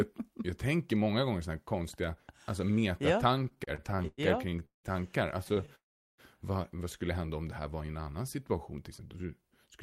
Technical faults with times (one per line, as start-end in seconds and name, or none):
3.39-4.87 repeated stalls (stutter)
5.44-5.70 repeated stalls (stutter)
5.75-6.21 call audio freeze
8.06-9.78 jitter buffer speed-up